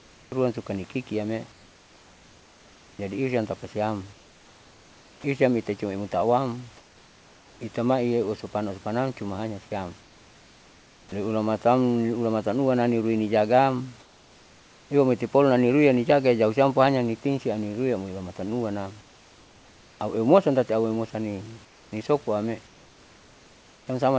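It's a speech clip, and the quiet stretches don't sound like the real room. From 0 to 5.24 s, 6.77 to 7.61 s, 10.01 to 11.12 s (right after "usupanam cumahanyasiam"), 14.00 to 14.90 s (after "luana rinui nijagaam"), 19.01 to 20.00 s (just before "aueumosan tati") and 21.65 to 23.87 s, the background turns into flat, featureless hiss, about 3 dB quieter in the mid-clip gaps. That's comfort noise in place of the background, likely from discontinuous transmission filling pauses with synthetic noise. At 5.22 s, the onset is clipped by the voice detector: about 20 ms of the start is missing, probably because the detector reacted late, so the speech snaps in abruptly.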